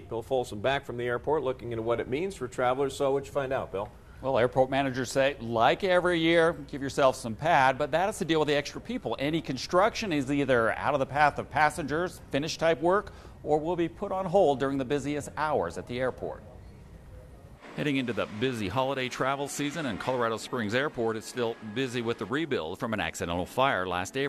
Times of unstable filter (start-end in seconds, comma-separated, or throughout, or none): none